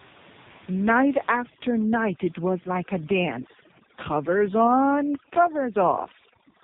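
It's a speech clip squeezed through the AMR narrowband mobile codec the whole way, and hard. Nothing above 4 kHz gets through, so it has that boxed-in phone sound, and the voice comes out buzzy and synthetic, the way it does when the codec's vocal-tract model is fed only a handful of pulses per frame. That heavy damage fits one of AMR-NB's lowest modes, somewhere around 5 kbps. Then from 1.33 s to the end there's overdone noise removal on top. The room noise, which sits about 20 dB under the voice, gets pushed down with little twinkling specks left behind. The suppressor is cutting whole frequency bands whenever they dip toward its noise estimate, and the quieter bits of the voice go with them.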